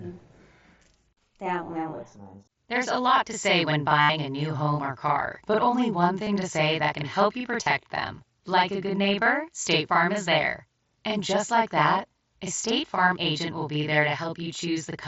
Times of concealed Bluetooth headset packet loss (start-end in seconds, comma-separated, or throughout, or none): 4.01-4.09, 6.24-6.27, 7.63-7.66